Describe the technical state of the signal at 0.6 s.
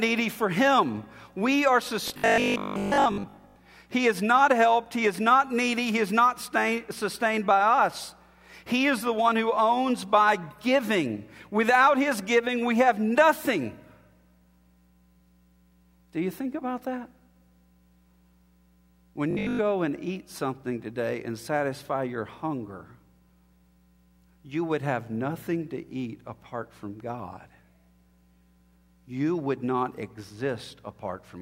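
At 0.6 s the signal is intact, with no audible fault at that point.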